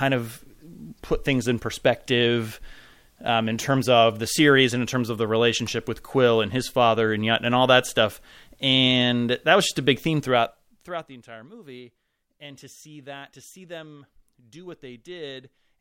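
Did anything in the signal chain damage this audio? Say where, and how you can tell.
Yes. From 10.24 to 11.18 s a fine ticking zipper noise rides on the speech as the level drops by about 20 dB. This is zipper noise from an unsmoothed gain stage that applies the fade in discrete jumps, roughly fifty a second, each step clicking.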